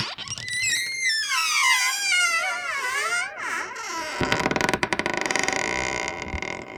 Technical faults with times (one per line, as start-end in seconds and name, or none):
none